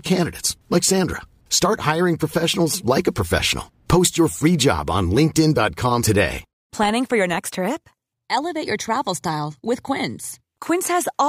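At 6.02 s the speech jumps abruptly ahead with a small blip, as though a stretch of the talk has vanished mid-flow. The likely cause is a stream segment skipped: one chunk of the segmented stream failed to load, so playback resumed from the next.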